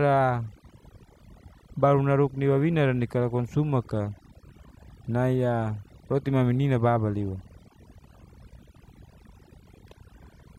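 Throughout the speech, the background drops to near silence flecked with twinkling specks: overdone noise removal, suppressing bands along with quieter speech detail.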